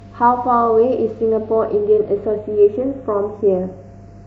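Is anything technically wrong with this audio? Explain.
Yes. Throughout the speech, a slow flanging sweeps through the tone when the two sides are summed to mono. This is channels drifting apart: the channels run on separate clocks, mismatched by a few tens of parts per million, so their offset creeps to a fraction of a millisecond and the comb notches glide across the spectrum.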